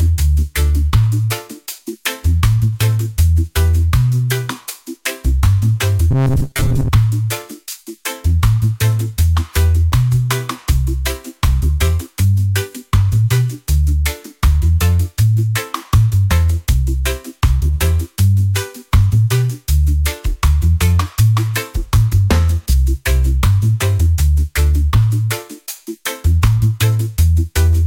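From 6.11 to 6.90 s the sound turns into a rigid metallic buzz. This is robotic sound from repeated short buffers. Audio likely arrived too late, so short fragments of about 7.5 ms were replayed. Most of the stretch is repeats. This imposes a fixed 134 Hz tone.

At 9.92 s a block of digital silence cuts in for about 0.73 ms, which fits a few dozen samples set to zero. The signal drops out and returns with no fade. The abrupt edges give a single sharp tick.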